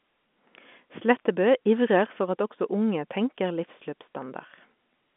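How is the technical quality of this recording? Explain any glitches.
Nothing here calls for an explanation, since the speech arrives over what sounds like ordinary G.711 telephone coding, with the narrow phone band topping out around 3.8 kHz and no glitches to speak of.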